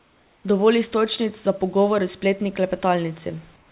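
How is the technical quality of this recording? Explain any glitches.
The recording has one kind of glitch, at both ends, where the background sounds wrong. The speech comes through a narrowband call path with nothing above 4 kHz, which fits G.711.

Comfort noise in place of the background runs from 0.00 to 0.44 s and again from 3.56 s to the end. In both spans the real room noise gives way to a smooth, featureless hiss. It is about 3 dB quieter. The likely cause is discontinuous transmission. The sender stopped sending while no speech was detected. The receiver filled the gap with synthetic noise shaped roughly like the background. It sounds like a flat, lifeless bed before and after the speech.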